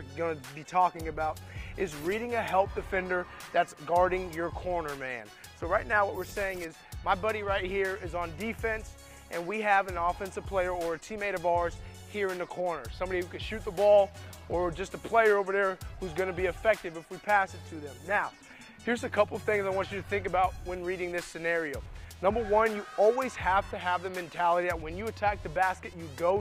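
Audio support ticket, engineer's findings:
Call bitrate drop at 0.97–5.05 s and 17.91–21.25 s. Sound turns coarse and muffled as highs vanish, worst for about 2.3 s and 2.0 s. Encoder starved after the bandwidth estimate fell. Fits Opus dropping from 64 kbps to roughly 22–24 kbps.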